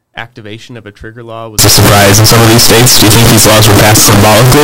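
From 1.59 s to the end, float read as integer: a nearly square waveform at an almost fixed, high level, harsh and loud, with noise level with the sound and dense broadband spectrogram energy, likely 32-bit float samples decoded as integers.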